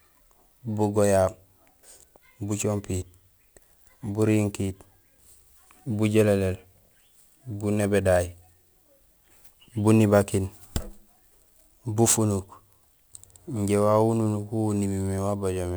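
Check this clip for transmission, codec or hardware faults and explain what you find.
One fault runs through the whole recording: crude rate conversion.

From start to finish, a gritty, inharmonic fizz rides on the speech, swelling on louder and brighter sounds and sitting about 25 dB below them. It fits a 48 kHz to 44.1 kHz change made by picking the nearest sample, unfiltered, leaving patterned timing errors that produce unrelated tones.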